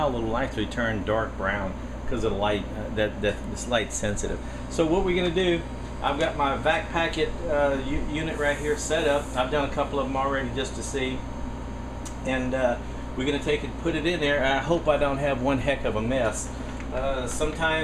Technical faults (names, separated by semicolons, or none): none